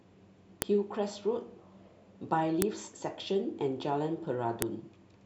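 Separate two-second chunks of this speech recording were joined without stripping their WAV headers, so the header bytes play back as samples. The result is a file header played as audio: a sharp, loud click at 0.62, 2.62 and 4.62 s, each start of a new piece.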